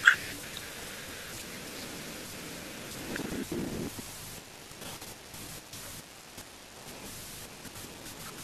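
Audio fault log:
No audible faults detected in this speech recording.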